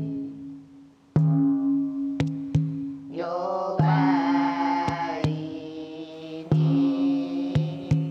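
A faint, steady chirping warble appears behind the sound from 6.12 s and continues to the end of the clip, sitting well below the main material. This is timecode bleed: linear timecode running at 30 frames per second has leaked in from a nearby track or cable. The code is a square wave that flips between two tones, around 1 kHz and 2 kHz, and that rapid alternation produces the chirping texture.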